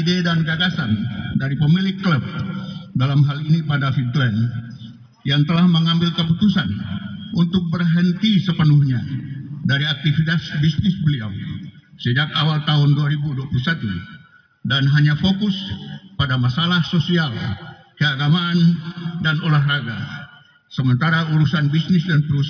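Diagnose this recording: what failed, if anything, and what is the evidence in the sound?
Nothing failed; no stage shows any audible problem.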